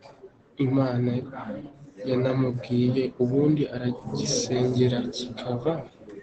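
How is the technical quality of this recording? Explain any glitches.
The recording is compromised by audible low-bitrate Opus voice compression across the whole speech clip. Opus voice compression is present from start to finish: the sound points to the SILK speech coder running at a low rate, around 12 kbps, in wideband mode. Everything above roughly 8 kHz is cut away, and the excitation is coded coarsely, so the voice sounds muffled, hoarse and faintly robotic. A spectrogram would show a hard ceiling near 8 kHz and smeared, blotchy harmonics.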